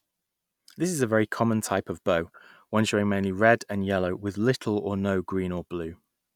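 No technical faults can be heard anywhere in this speech recording. Nothing in the signal chain draws attention to itself at any point.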